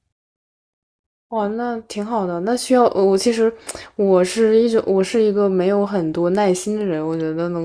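Nothing goes wrong anywhere in this bit of speech, so there's no fault to point to at any moment.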